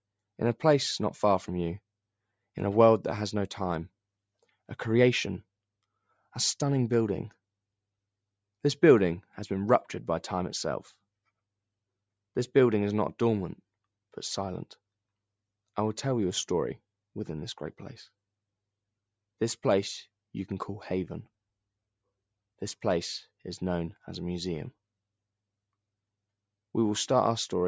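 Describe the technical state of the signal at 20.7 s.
At 20.7 s the signal is intact, with no fault present; the call microphone processing is working as expected, keeping the content within a band that tops out at 8 kHz and trimming only the lowest bass.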